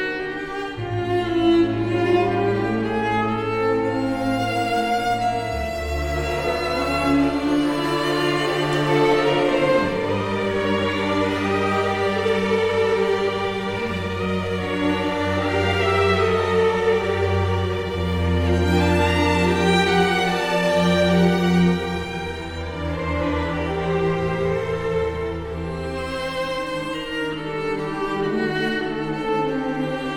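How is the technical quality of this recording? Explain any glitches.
No glitches or technical faults are audible anywhere.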